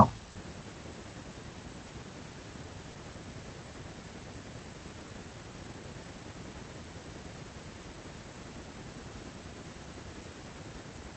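The sender's voice detector likely judged quiet stretches as background and stopped transmitting, so the receiver filled in comfort noise. This sound dropped by the voice detector gives way to steady noise or near silence at 0.31–0.35 s, 1.87–1.89 s and 2.91–2.95 s, losing 40, 20 and 40 ms.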